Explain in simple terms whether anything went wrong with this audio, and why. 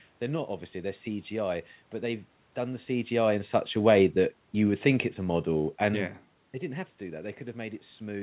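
From 3.11 to 6.11 s, after "but they've done the", voice and background fade together: automatic gain falling, as the gain control turned down input it found too loud or too noisy.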